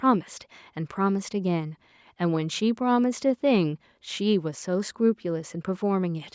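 No technical faults can be heard in the speech, which shows the ordinary marks of call microphone processing: the lowest bass is trimmed and nothing reaches above 8 kHz.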